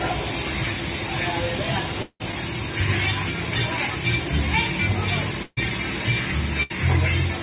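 At 2.02 s the sound smears into a fading buzz or hiss, then near-silence until 2.22 s. That's likely a long network dropout, with about 180 ms never arriving. Then there are two bursts of packet loss, at 5.43 to 5.59 s (about 140 ms missing) and 6.63 to 6.72 s (about 80 ms missing). In each, the last sound is stretched and faded before playback jumps ahead. All of it sits in a band topping out at 4 kHz, which fits a G.711-style call codec.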